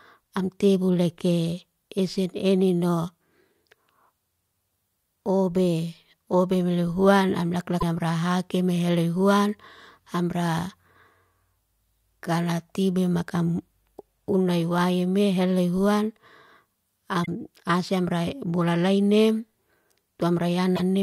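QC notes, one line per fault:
7.77–7.83 s: damaged data in a compressed stream. A brief glitch of about 56 ms as corrupted frames are misread and the decoder resyncs on the next header.
17.23–17.29 s: damaged data in a compressed stream. Another short glitch of about 56 ms where bad bytes break frame decoding until sync returns.
20.73–20.80 s: damaged data in a compressed stream. A 67 ms blip near the end of the clip, from the decoder losing frame sync over corrupted data.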